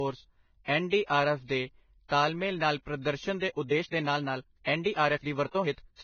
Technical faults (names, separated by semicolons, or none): low-bitrate audio saved at a high bitrate; time-stretched section